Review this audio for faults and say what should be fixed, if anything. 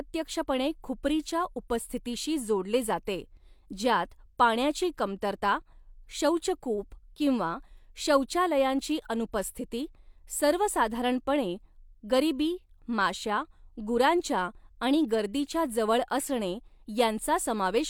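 Nothing here needs fixing, since the recorded speech signal holds steady throughout without any technical fault that a careful listener would flag.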